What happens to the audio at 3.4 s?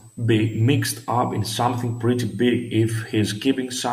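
At 3.4 s the speech carries a switching supply whistle, which runs through the whole clip rather than starting there. A switching power supply is cycling in an audible burst mode or beating against another supply, and that leaks a high, thin whistle into the audio. Its pitch wanders between about 7.4 and 8.6 kHz, sitting roughly 30 dB below the speech, so it reads as a steady, faint whine over the speech.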